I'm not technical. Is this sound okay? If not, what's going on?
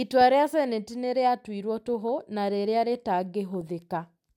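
No. There are two short bursts of DAB burbling, a digital radio fault. The first is a brief blip at 1.89 s, between "nĩ rĩatuirwo" and "toho na rĩrĩa". The second runs from 3.61 to 3.67 s. Weak reception let a small share of corrupted data slip past the receiver's error correction. The corrupted data puts short blips of noise into narrow slices of the sound.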